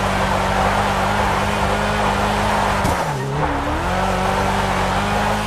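No technical faults are audible.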